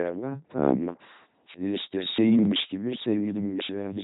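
From start to finish the speech passes through an LPC-10 vocoder, which fits the heavy damage of a 2.4 kbit/s military codec. Each frame is rebuilt as either a pulse-driven buzz or pure noise through a small all-pole filter, giving a mechanical robot voice with stray hiss or buzz where voicing is misjudged. A spectrogram shows evenly spaced harmonics, smeared formants and nothing above 3.8 kHz.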